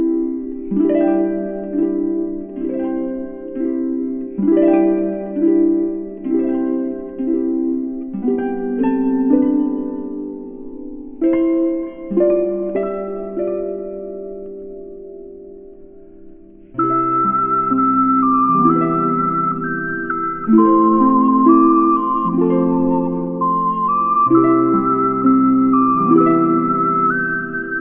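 Throughout, faint metallic grit sits under a hard 3 kHz ceiling: aliasing, with unfiltered highs folded back by resampling that fits a 6 kHz rate.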